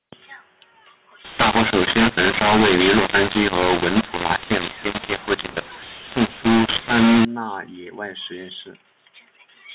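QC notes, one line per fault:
1.25–7.25 s, mu-law and A-law mixed up: A-law telephone speech is decoded with the mu-law table for six seconds. Because the two logarithmic curves map each byte to different levels, amplitudes are scrambled and near-silent samples jump well above zero, so the speech turns harsh and gritty and the pauses hiss. On the waveform, peaks are jagged and uneven and the gaps are no longer flat. On the spectrogram, broadband noise smears up to the normal 4 kHz telephone ceiling.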